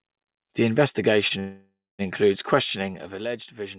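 At 1.28 s, a packet arrived late and the jitter buffer briefly ran dry, producing a short stall from a late packet. The receiver held the last piece of speech for about 22 ms until the packet turned up, then carried on from the same point. Nothing is lost, but the sound lingers a touch too long around 1.28 to 1.33 s, with a faint buzzy catch in the narrowband, 4 kHz-limited call audio.

From 1.39 to 2.02 s comes a call audio freeze, likely caused by packets held up in transit long enough to empty the jitter buffer. The last sound is stretched into a fading buzz that dies away into about 240 ms of silence. About 0.6 s of gap is inserted in all, after which the speech resumes exactly where it stopped, with nothing dropped but the whole rest of the clip pushed later.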